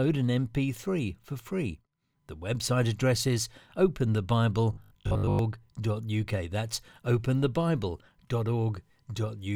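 From 4.73 to 5.39 s the speech becomes a rigid 50 Hz buzz: robotic sound, likely from repeated 20 ms buffers, fixed-pitched rather than gapped.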